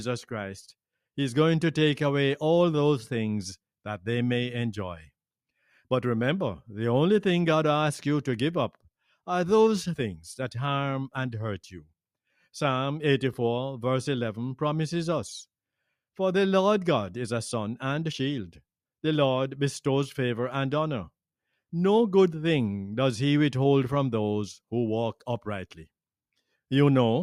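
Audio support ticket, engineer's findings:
Sound cut by the noise suppressor, 11.77–11.92 s. Level dips about 14 dB for roughly 150 ms. Suppressor misread the sound as noise, attenuated it.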